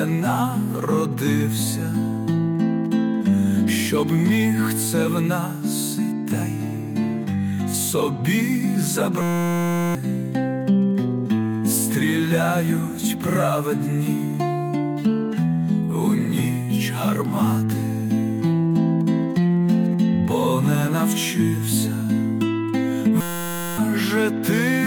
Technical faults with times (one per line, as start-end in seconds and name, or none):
9.21-9.95 system hang loop
23.21-23.78 system hang loop